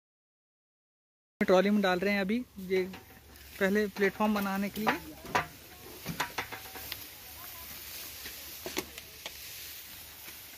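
Cut-off start, 0 to 1.41 s: digital silence, then the audio enters abruptly mid-sound at 1.41 s with no natural attack, because capture began late.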